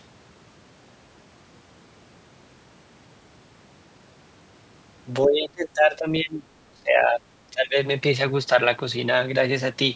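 From 5.26 to 7.22 s the speech sinks sharply, by something like 25 dB at its deepest, thinning and breaking into fragments for about two seconds. A smaller dip of roughly 15 dB follows from 7.47 to 7.76 s. This is likely speech suppressed in double talk: an echo canceller mistook the talker for returning loudspeaker echo while the far side spoke. On a waveform the envelope collapses; a spectrogram shows energy, especially the upper harmonics, fading out in patches.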